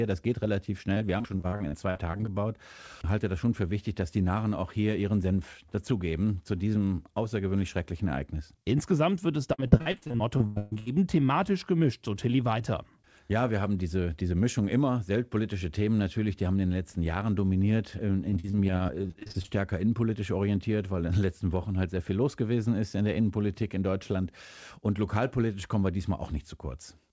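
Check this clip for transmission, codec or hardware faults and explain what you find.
Yes, the clip has one recurring transmission fault: repeated packet loss, which gives a robotic sound in three stretches. The call-codec path shows only its band limit, with nothing heard above 8 kHz.

Repeated packet loss (robotic sound) occurs from 0.94 to 2.29 s, just after "geht relativ"; from 9.53 to 10.88 s, between "wird es" and "thematisch gemischt so"; and from 18.30 to 19.50 s, just before "innenpolitisch orientiert weil in". In each stretch the stream drops out many times in quick succession, and the receiver fills every hole by stretching the last sound it had. About 0.4 s is lost in the first and third stretches, with the longest gaps roughly 40 to 50 ms. The middle stretch is worst: about 0.66 s is lost, nearly half the span is patched over, and one gap runs to 136 ms. The result is choppy speech with pieces missing. 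A single lost packet makes one brief smear, but here the patches come in a dense run. Codec coding noise stays steady through the whole clip, while this damage comes and goes in clear bursts.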